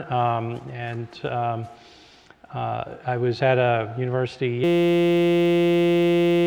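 At 4.64 s the audio gives way to a system hang loop that runs until the clip ends at 6.47 s. The computer or its audio driver stopped delivering new data, and the hardware kept replaying whatever sat in its ring buffer. That buffer holds only about 5.8 ms, which fits a 256-sample buffer, so the same fragment repeats several hundred times and fuses into a steady buzz at 172 Hz. About two seconds of real audio are lost.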